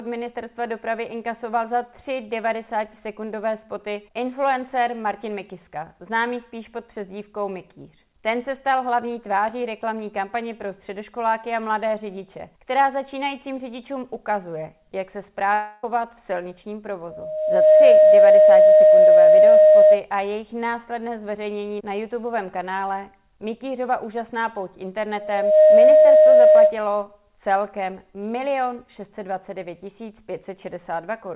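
From 15.54 to 15.84 s, about 0.3 s of audio is missing. In its place the sound just before the gap carries on as a synthetic continuation rather than going quiet, and the audio then resumes further along with that stretch skipped. This is likely a long network dropout that the receiver concealed. A waveform shows no flat silent section there. A spectrogram shows a smeared, blurred band instead of clear detail.

A loudspeaker feedback squeal begins at 17.10 s and lasts until 20.03 s. It returns from 25.17 to 26.78 s. Both times it is a single steady tone at 618 Hz. The tone swells over roughly 0.7 s in the first episode and about 0.4 s in the second, reaching around 15 dB above the rest of the sound. The microphone is picking up its own loudspeaker, and at 618 Hz the loop gain exceeds one, so that frequency keeps reinforcing itself. On a spectrogram each episode is a bright horizontal line at 618 Hz that ramps up in brightness. 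On the waveform the envelope swells into a dense, even block. The call path's band limit at 4 kHz is visible throughout as an empty region above that line.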